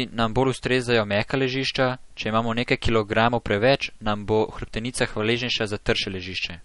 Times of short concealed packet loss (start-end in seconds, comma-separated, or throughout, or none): none